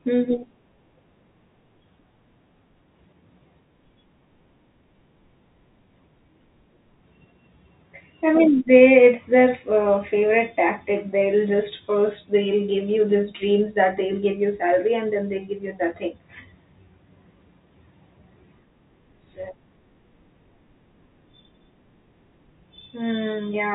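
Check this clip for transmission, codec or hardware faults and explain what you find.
No transmission, codec or hardware faults turn up in this speech clip. It has passed through G.711 telephone coding, which fits 64 kbps mu-law, so nothing reaches above about 3.9 kHz and any quantisation noise riding under the signal is faint at most.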